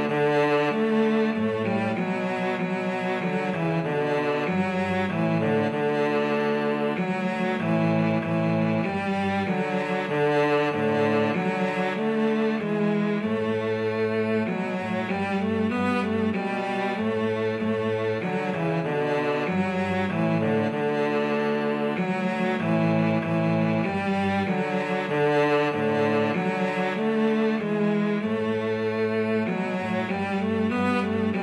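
No technical faults can be heard at any point in the recording, and the signal path holds steady throughout.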